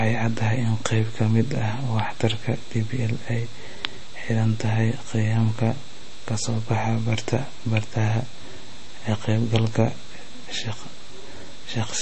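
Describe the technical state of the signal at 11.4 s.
Watery, swirling speech with nothing above 8.3 kHz, present throughout the clip. This is likely MP3 compression at a low bitrate, roughly 32 kbps, dropping treble and weak frequency lines.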